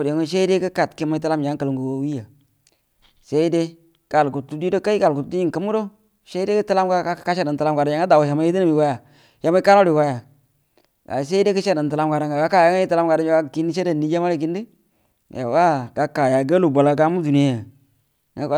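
No technical faults can be heard anywhere in this speech recording. There are no dropouts, glitches or interruptions at any point in the audio.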